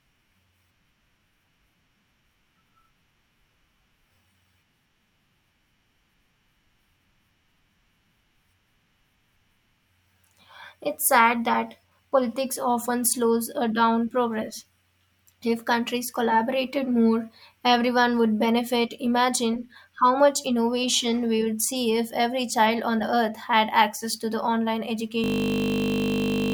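At 25.24 s the speech locks into a system hang loop that runs to the end at 26.53 s. The driver stalled while the hardware kept replaying one 20 ms slice dozens of times, giving a steady 50 Hz buzz and swallowing about a second and a half of audio.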